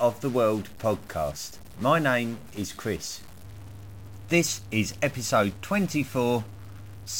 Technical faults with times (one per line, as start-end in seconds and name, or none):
0.00-7.19 stuck bit